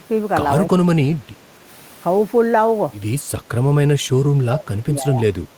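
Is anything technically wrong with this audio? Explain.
Yes, there's speech suppressed in double talk. The first bit is tiny, from 0.00 to 0.04 s, a dip of about 15 dB. The bigger one runs from 4.46 to 5.24 s, where the speech sinks by up to about 20 dB for most of that stretch, sounding pulled back. The likely cause is an echo canceller hearing both ends talking at once, failing to tell the near talker from loudspeaker echo, and ducking everything.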